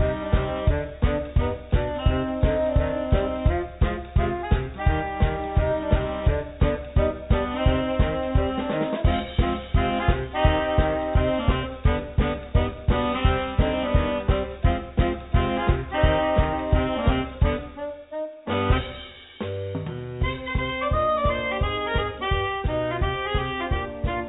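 No technical faults are audible anywhere in the recording.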